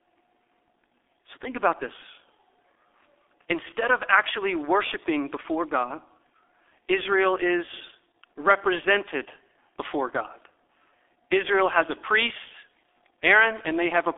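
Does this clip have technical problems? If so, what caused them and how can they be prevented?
Yes. Throughout, the speech shows heavy G.723.1 codec damage: a 300 Hz to 3.5 kHz telephone band, nothing above 3.6 kHz, and a hoarse texture from slow 30 ms frame updates, which fits a 6.3 kbit/s stream. Unlike a plain low-pass filter, it also blurs consonants. Prevent it by recording or transmitting with a wideband codec at a higher bitrate.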